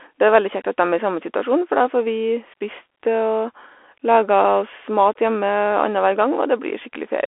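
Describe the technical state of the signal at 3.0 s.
At 3.0 s the speech passes through a Bluetooth CVSD headset codec, and this holds for the whole clip. CVSD codes each sample as one bit that says up or down, at 64 kHz, and the step size adapts as it goes. Here the band runs from 300 Hz to 3.4 kHz, and nothing gets through above 3.8 kHz. The damage is plainly audible. Loud high parts outrun the step and distort. S sounds turn scratchy. A granular hiss sits beneath the speech.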